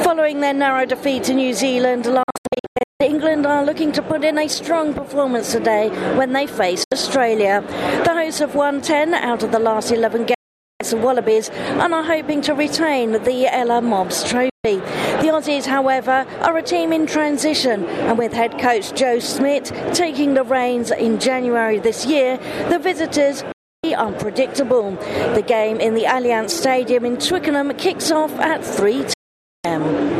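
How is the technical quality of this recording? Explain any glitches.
The recording is marred by repeated digital broadcast dropouts at 2.23, 6.84, 10.34, 14.50, 23.52 and 29.14 s. Each time the receiver lost valid frames and muted, so the audio snaps to silence within about 3 ms and returns 72 to 576 ms later, with the content in between gone. The first one breaks into several short holes over about 0.77 s, and the lost durations fit frames of roughly 24 ms.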